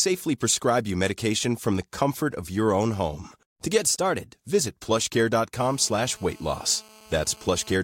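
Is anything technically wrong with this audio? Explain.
Yes, there are two problems.

From 3.80 to 4.35 s the speech suddenly runs about 6% fast and rises by a full semitone (100 cents), then snaps back to normal speed and pitch. This is a drift correction step, likely from clock-matching software that briefly raised the playback rate in one jump to drain or refill its buffer. Because speed and pitch move together, the voice sounds momentarily sped up and sharpened.

From 5.56 to 7.76 s a hard, raspy buzz sits under the speech at about 26 dB below the signal. Its fundamental is 217 Hz and it carries many harmonics. This is GSM phone buzz: a nearby 2G handset transmitting in 217 Hz bursts during a call, with the audio circuitry rectifying those radio pulses into audible noise. Since the phone is on a call, the buzz is nearly steady.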